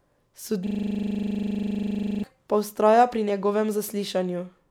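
From 0.67 to 2.24 s the speech locks into a rapid 25 Hz stutter, a system hang loop replaying one 40 ms buffer after a driver froze.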